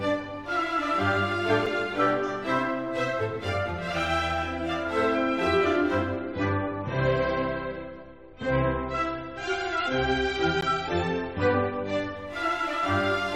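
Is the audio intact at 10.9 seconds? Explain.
No. At 10.9 s the sound is inside a stretch of adaptive stream at a lower bitrate, running from 6.16 s to 12.16 s. The stream dropped from 128 kbit/s MP3 to 32 kbit/s for that stretch, so nothing sounds above about 8.3 kHz. The treble turns dull, codec artefacts rise, and the quality changes abruptly without any gap.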